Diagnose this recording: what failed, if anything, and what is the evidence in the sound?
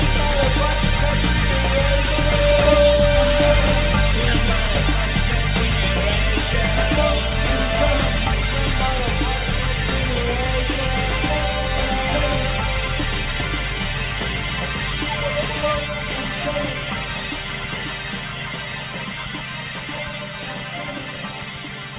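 Nothing has failed: the audio comes through an ordinary call path with no energy above about 4 kHz, a narrowband character that fits G.711 mu-law at its usual 64 kbps, and there are no dropouts, clicks or level breaks anywhere in the recording.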